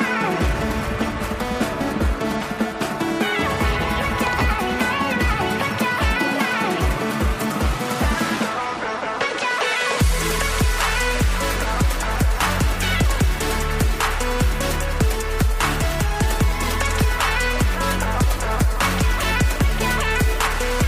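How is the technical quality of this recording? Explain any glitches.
There are no glitches here: the signal stays steady and intact, with nothing in it that points to a technical fault.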